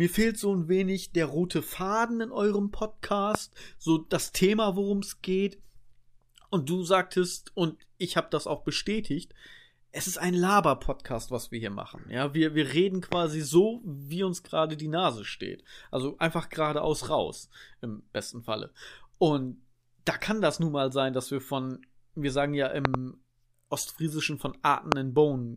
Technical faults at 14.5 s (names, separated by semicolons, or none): none